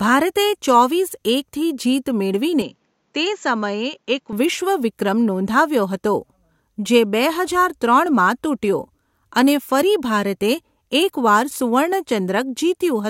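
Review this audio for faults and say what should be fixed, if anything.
From 2.62 s to 4.33 s the speech abruptly turns duller and boxy, dropping roughly 5 dB in level, then snaps back to its original clarity, with no gap at either transition. Nothing is present above 7.6 kHz in that stretch, and a faint new noise floor appears, roughly 50 dB under the speech. The likely cause is an input switched to a poorer device, briefly routing a narrower-band microphone with its own tone, gain and noise. Fixing this means locking the recording input to a single chosen device so the system cannot change microphones mid-take.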